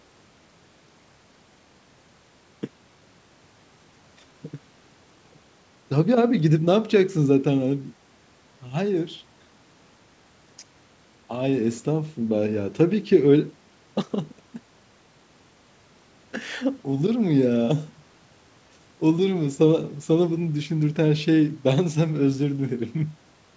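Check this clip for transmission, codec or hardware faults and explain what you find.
Nothing found in this speech: the band ends at 8 kHz, which fits normal call microphone processing feeding a WebRTC call path with a wideband codec such as G.722 at 64 kbps.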